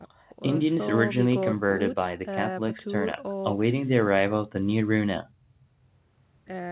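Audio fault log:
No fault to log in this audio.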